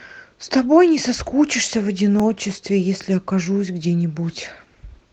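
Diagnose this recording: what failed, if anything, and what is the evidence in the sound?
Sharp clicks at 1.14, 2.20, 3.02 and 3.83 s point to dropped samples, likely in the driver or buffer: under a millisecond vanishes and the waveform jumps.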